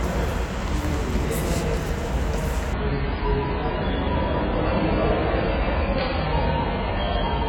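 Adaptive stream at a lower bitrate, from 2.74 s to the end at 7.48 s: the stream abruptly switches to a much leaner version with no gap, consistent with a drop from about 96 kbit/s AAC to roughly 12 kbit/s. Everything above 5 kHz vanishes, dulling the sound and raising audible codec artefacts.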